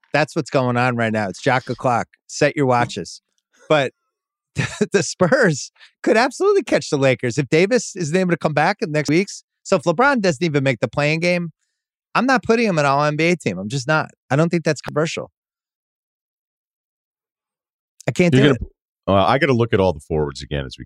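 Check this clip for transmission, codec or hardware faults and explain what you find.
The recording skips three times, at 3.29 s, 9.09 s just after "come back in the", and 14.89 s just after "I don't think that's". The likely cause is audio missing between chunks: the recorder, working in roughly 6-second blocks, drops about a fifth of a second at each handover and butts the edges together, so speech jumps abruptly mid-flow with no gap.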